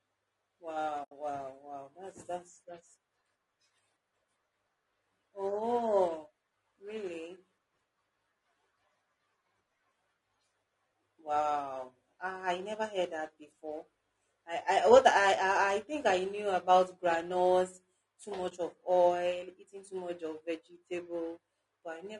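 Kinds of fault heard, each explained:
Low-delay AAC compression: The speech sounds rough and grainy throughout, with noise filling the gaps between harmonics and a thin, synthetic top band, likely from AAC-ELD's short frames at a rate fitting about 32 kbps. A spectrogram shows smeared harmonics and a patchy upper band.
AAC frame loss with muting: The decoder zeroed lost frames, so the sound fades out and back in, from 1.03 to 1.12 s and from 18.49 to 18.52 s. The waveform shows tapered, near-silent dips. The spectrogram shows soft-edged vertical blanks across all frequencies.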